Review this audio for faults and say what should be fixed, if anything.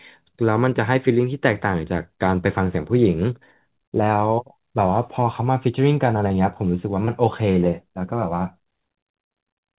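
Short concealed packet loss occurs twice in the speech, at 6.28 to 6.32 s and at 7.05 to 7.09 s. Each time about 20 ms of audio failed to arrive in time, and the receiver filled the gap by extending the preceding sound and then blending back into the real signal, leaving a brief smear or wobble. On a spectrogram each spot shows smeared, repeated harmonics or shaped noise over a 20 ms strip. In the waveform it appears as a short stretch of copied periods or noise with a soft seam at each end. Nothing shows above 4 kHz, as expected from the G.711 narrowband path. To prevent these gaps, give the jitter buffer more headroom or add forward error correction or redundancy on the network link.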